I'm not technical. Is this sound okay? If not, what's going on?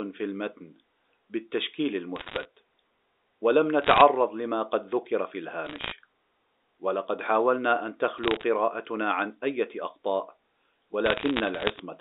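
No. There are bit errors on a digital phone line: short bursts of crackle at 2.16 to 2.45, 3.82 to 4.02, 5.65 to 5.92, 8.18 to 8.43 and 11.06 to 11.80 seconds, where stray flipped bits each spoil a single sample. Unlike a dropout, the speech carries on unbroken underneath the sharp ticks.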